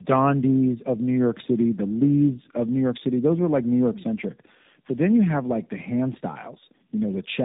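Tandem speech coding runs through the whole clip. The speech has passed through two low-rate speech coders in a row, with a plain telephone-grade link between them. The sound fits a G.729A coder followed by AMR-NB. The second coder works on audio that the first has already degraded, so the errors stack. Nothing reaches above 3.8 kHz. The speech sounds muffled and rough, with a warbly, watery edge.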